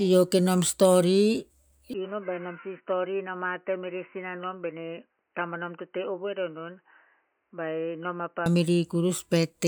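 At 1.94 s the speech abruptly turns dull and boxy, nothing above 3 kHz, about 10 dB quieter, with a faint new noise floor, until it clears at 8.46 s. This is likely an input switched to a poorer device. The spectrogram shows a hard ceiling; the waveform shrinks.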